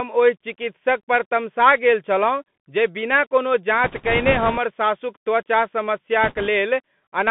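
Throughout, the speech carries the Bluetooth CVSD headset codec. The one-bit delta coding, which fits a 64 kbps headset link, confines the band to about 150 Hz to 3.5 kHz. Its adaptive step lags fast loud peaks, leaving scratchy sibilants and granular hiss rather than the smeared, warbly artefacts of a transform codec.

From 3.84 to 4.58 s, just after "जे बिना कोनो" and ending before "सासुक त्वचा", there are bit errors on the Bluetooth voice link at a rate of a few percent. They flip coding bits that each carry little weight, giving a rushing crackle with no loud clicks or silent gaps like packet loss would. A shorter, lighter burst follows "सासुक त्वचा" from 6.23 to 6.48 s.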